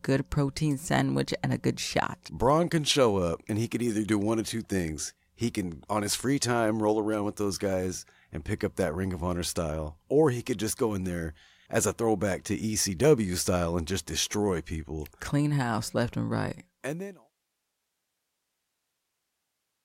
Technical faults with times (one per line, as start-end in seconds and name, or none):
none